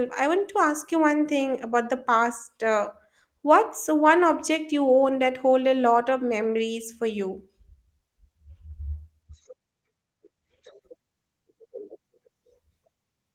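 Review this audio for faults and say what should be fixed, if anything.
A call bitrate drop from 9.24 to 10.87 s makes the sound coarse and muffled, consistent with the encoder falling from about 32 to 13 kbps. Bandwidth shrinks from 20 kHz to 8 kHz, so the spectrogram goes dark above 8 kHz. Smoother, more gradual bitrate adaptation would prevent it.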